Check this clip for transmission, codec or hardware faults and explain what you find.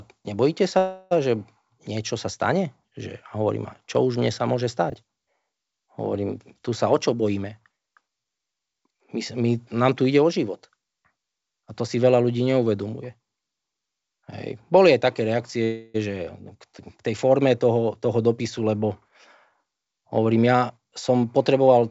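Three kinds of fault turn up in this speech recording: two stalls, one brief reordering, and two hurried stretches. They sit on a call path whose G.722 coding at 64 kbps leaves nothing above 8 kHz.

Call audio freeze, 0.78 to 1.13 s and 15.64 to 15.96 s. The last sound is stretched into a fading buzz or hiss for about 330 ms and then 302 ms, with no true silence. The likely cause is packets held up in transit so the jitter buffer ran dry and the receiver kept extending what it had. Unlike a dropout, nothing is missing. The speech resumes exactly where it paused, so each event is an inserted gap.

Chunks out of order, 4.90 to 4.94 s. A 20 ms chunk arrived one chunk late and plays after the chunk that should follow it. That puts three hard joins into a very short span and makes a jumbled blip. What separates it from a dropout or a stutter is that no audio is lost or repeated. The same material is present, only swapped in order.

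Jitter buffer speed-up, 6.39 to 8.95 s at 112% speed and 19.08 to 21.83 s at 111%. Roughly 300 ms was trimmed in each stretch. The receiver removed many short pitch-period slices to shrink an overfilled buffer, so the speech sounds rushed. Unlike a resampling error, the pitch stays the same. Only the pace increases, and normal speed returns once the buffer is back at its target.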